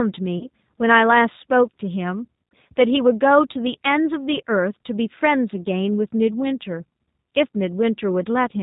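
G.729 codec coding runs through the whole of this speech recording. The bandwidth stops near 4 kHz and the texture is plainly rough and synthetic, which fits an 8 kbit/s G.729A stream that rebuilds the voice from a vocal-tract filter, a pitch predictor and a few pulses per frame. VoIP packet loss concealed by the speech codec appears from 0.38 to 0.47 s. About 30 ms of audio went missing, and the decoder filled the gap by stretching its last pitch and filter into a fading buzzy tone or coloured noise. Because each frame builds on the previous one, the sound stays weakened until about 0.47 s.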